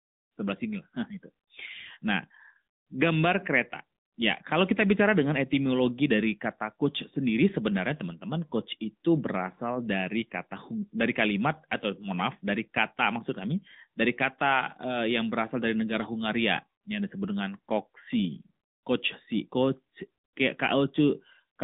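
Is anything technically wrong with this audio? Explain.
Yes. Throughout the speech, the AMR narrowband mobile codec has rebuilt the voice from a vocal-tract model driven by sparse pulses. The band runs only from 200 Hz to 3.7 kHz, and the plainly audible buzzy, synthetic edge fits a mid-rate mode near 10 kbps.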